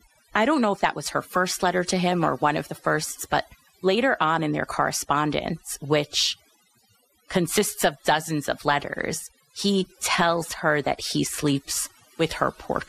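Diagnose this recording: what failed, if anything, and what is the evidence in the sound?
Overdone noise removal at the processing stage: throughout, the background drops and breaks up into twinkling specks. A spectrogram shows isolated coloured dots on black where bins were gated.

Dull, gurgling, granular speech throughout is likely MP2 compression at a codec stage, around 80 kbps. On a spectrogram, upper sub-bands blink on and off in frame-sized blocks.

DAB burbling from 3.13 to 3.16 s: a brief burst of short noise blips, consistent with about two corrupted MP2 frames under weak reception. Short noise blips show in single sub-bands on the spectrogram there.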